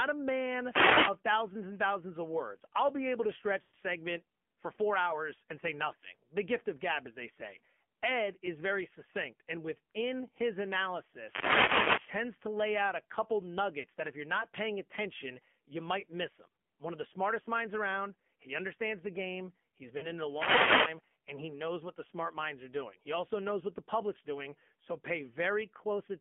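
The whole recording passes through the AMR narrowband mobile codec. The band is held to roughly 200 Hz to 3.4 kHz, and the speech has a plainly buzzy, synthetic edge, which points to a low AMR-NB rate around 7.4 kbps, where few pulses remain to drive the vocal-tract model.

From 0.64 to 1.19 s, just before "thousands and thousands of", a wireless microphone noise hit appears as a swish of static. The radio link fades as reflections cancel, and receiver noise rises over the signal.

From 3.62 to 3.75 s, between "I'll be able to" and "segment for four hours", lost AMR speech frames leave about 120 ms where the decoder stretches the last good sound and fades it toward silence. This fits a run of roughly six 20 ms frames that failed their checks.

A second noise hit runs from 11.16 to 12.2 s. At 13.8 s, another loss of about 40 ms gives a brief dip. The same happens from 19.98 to 20.08 s, just before "in it a". 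A final static burst follows from 20.26 to 21.03 s.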